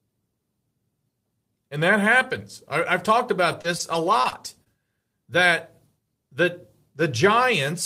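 Repeated packet loss (robotic sound) runs from 3.51 to 4.68 s, after "happens I I've talked": five short gaps, the longest 24 ms, patched by stretching earlier sound into choppy speech.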